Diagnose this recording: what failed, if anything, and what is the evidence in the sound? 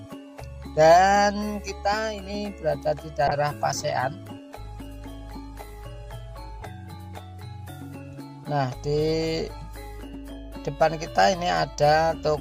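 The failure sits at the call-processing and codec stage: a call bitrate drop. Between 3.29 and 7.57 s the connection's bandwidth estimate fell, and the encoder was forced to spend far fewer bits on each frame. The sound turns rough and watery, with coarser, smeared detail, consistent with a fall from roughly 64 kbps to about 21 kbps. It is worst for nearly two seconds, then clears as the bitrate climbs back.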